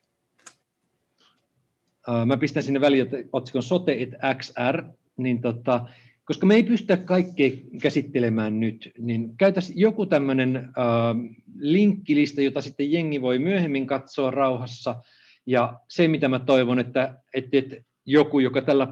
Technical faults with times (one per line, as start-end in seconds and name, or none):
none